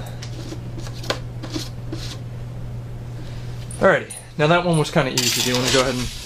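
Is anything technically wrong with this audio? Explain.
No, nothing technically wrong can be heard anywhere in this audio.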